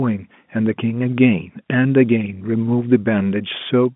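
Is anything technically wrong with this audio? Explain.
No, nothing is technically wrong with this audio.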